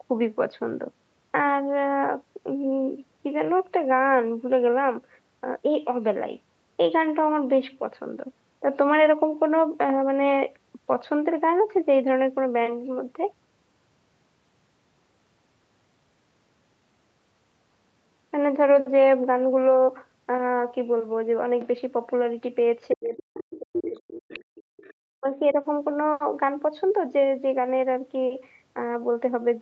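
From 21.6 to 21.67 s and 22.9 to 22.97 s, faint scraps of the other side's voice leak through. A loudspeaker echo was likely not fully cancelled. They sit well below the talker.

From 22.94 to 24.58 s, the speech is suppressed in double talk. The talker's level drops by as much as about 40 dB, in pieces totalling about 1.5 s. The echo canceller likely turned both sides down while both were speaking.

The other side's voice keeps leaking through in this stretch, at 23.38–23.56, 23.73–23.99, 24.19–24.42 and 24.59–24.94 s. The 23.73 s scrap is loudest, nearly level with the talker.

From 25.0 to 25.57 s, the speech is suppressed again. It dips by up to about 40 dB for roughly 0.4 s.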